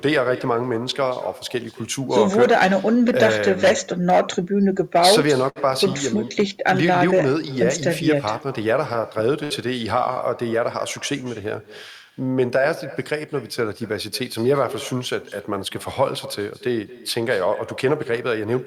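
Throughout the speech, a quieter, thinner copy of the talker trails each phrase by around a fifth of a second, sitting about 17 dB below the voice. This is echo with no canceller: the far end's loudspeaker feeds its microphone, and nothing strips that return path.

At 5.49 to 5.58 s, a sound is held too long, stretched by 64 ms, and then the speech carries on with nothing lost. That is a short stall from a late packet: the jitter buffer ran dry, and the receiver extended the last sound until the packet arrived, adding that much delay.

From 9.44 to 9.52 s, the audio turns into a held, fading continuation for 61 ms and then resumes further on, with about 60 ms of speech gone. This is a burst of packet loss, concealed by stretching and fading the last sound across the gap.

From 17.92 to 18.51 s, the speech runs hurried at about 106% speed with its pitch unchanged, dropping some 40 ms in total. 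This is a jitter buffer speed-up: the receiver trimmed short pitch-period pieces repeatedly to shrink an oversized buffer.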